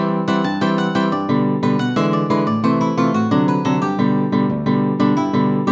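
No technical faults can be heard in the clip, so there is nothing to describe in time order.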